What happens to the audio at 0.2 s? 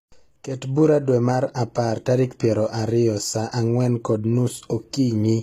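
At 0.2 s you're hearing the same damage that runs through the whole speech clip: the s sounds come out gritty and lispy, the top end stops dead at about 14.9 kHz, and it's likely HE-AAC compression at a low bitrate, something like 20 kbps, with the treble rebuilt from copied lower bands.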